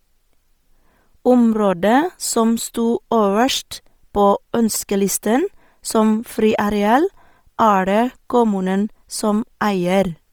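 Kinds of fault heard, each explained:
Bluetooth LC3 compression: speech throughout has a breathy, grainy edge, heavily damaged, likely from LC3 coding near 32 kbps, with its upper spectrum partly filled with noise.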